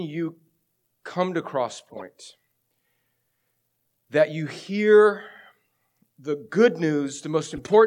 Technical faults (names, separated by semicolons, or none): corrupt frame decoded